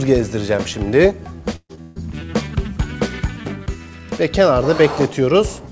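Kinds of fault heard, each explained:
Burst of packet loss: Twice the sound stalls into a held, fading tail before jumping ahead, from 1.56 to 1.71 s and from 1.81 to 1.98 s. A run of packets arrived too late or not at all, so the receiver stretched the last sound and turned it down over about 130 to 140 ms, going silent for the final 60 ms in the first case. Play then resumes further on, with about 140 ms of material gone each time.
Short concealed packet loss: Between the two bursts, at 1.75 to 1.79 s, there is a brief smear where the sound briefly wobbles rather than stopping. About 20 ms of audio failed to reach the decoder in time, and the receiver covered the hole by extending the preceding sound for roughly 22 ms, then crossfaded back into the real signal. Coming so soon after the first burst, it adds to a stretch of unsteady, broken sound.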